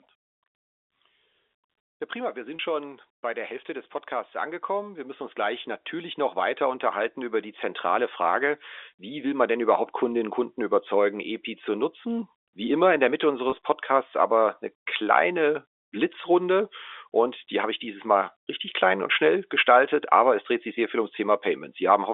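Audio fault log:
2.56–2.59 s and 13.50–13.52 s, packet loss with pitch repetition: Audio data went missing in transit, about 30 ms in the first gap and 20 ms in the second, which fits three and then two lost packets. The receiver bridged each hole by repeating the last pitch period it had, fading it out. Because both gaps are short, the sound briefly holds on one slightly buzzy, static tone before the speech picks up again.
3.66–9.56 s, automatic gain rising: The automatic gain control judged the incoming level too low and kept turning its gain up, by about 10 dB in total over nearly six seconds. Since the control acts on the whole signal, the voice and the background noise swell together rather than the speech alone getting louder. Over the G.711 telephone band, limited to roughly 300 Hz to 3.6 kHz, the background rises along with the talker.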